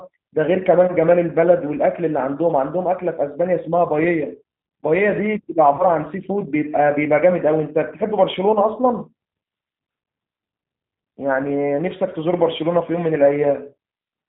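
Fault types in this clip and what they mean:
G.729 codec: the whole clip runs through this 8 kbit/s VoIP coder, which models the voice as a tract filter plus a pitch predictor and a few pulses per frame. Nothing above 4 kHz survives, and the speech comes out plainly rough and a bit synthetic throughout.
VoIP packet loss concealed by the speech codec: around 5.76 to 5.85 s a gap of about 30 ms, which fits a single lost packet, gets papered over by the decoder repeating its last pitch and filter at falling gain. You hear a brief smear that takes a moment to recover.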